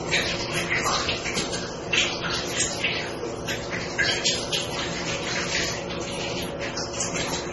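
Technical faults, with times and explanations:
Throughout, transcoding between lossy codecs: nothing remains above 11.7 kHz, and two different kinds of compression damage are heard together. A single low-bitrate encode would show just one consistent signature. Here the mix points to a chain of MP3, then HE-AAC, then MP3 again, likely at low rates around 24 to 32 kbit/s, with each stage re-encoding the previous artefacts and the lowest cut-off carried through.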